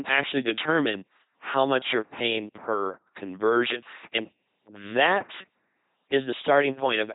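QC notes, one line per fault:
Throughout, LPC-10 vocoder: the speech has the buzzy, mechanical robot quality of a very low-rate vocoder, heavily damaged, with nothing above 3.9 kHz. Each short stretch is rebuilt by a simple all-pole filter fed by either a pulse train or noise, so every instant is forced to be fully voiced or fully unvoiced. That produces the flat buzz and misplaced hiss, which fits the 2.4 kbit/s LPC-10 scheme.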